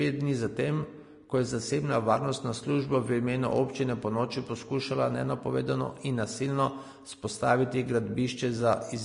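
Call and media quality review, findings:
Vorbis compression, throughout: speech hissy and grainy, nothing above 10.6 kHz; likely a low-bitrate Vorbis encode, around 36 kbps, quantising treble detail into noise.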